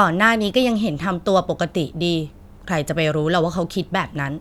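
Nothing stood out on listening to this speech recording.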